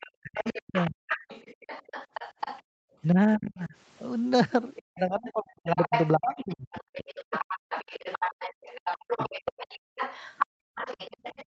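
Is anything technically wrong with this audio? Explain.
Yes. This speech clip has three echo-control faults.

Other side's voice leaking through, 0.0 to 3.5 s and 4.76 s to the end: likely residual loudspeaker echo the canceller missed, sitting roughly 10 dB under the talker as a second voice.

Speech suppressed in double talk, 0.18 to 0.99 s, 3.12 to 3.73 s and 4.89 to 9.73 s: likely the canceller couldn't separate the overlapping voices, so the talker dips or cuts out, by up to around 40 dB, for about 3 s in the last stretch.

Background gated by the echo canceller, 2.63 to 2.84 s and 10.46 to 10.75 s: the canceller clamped the microphone while the loudspeaker played, dropping the room sound by about 38 dB and about 33 dB before it returns.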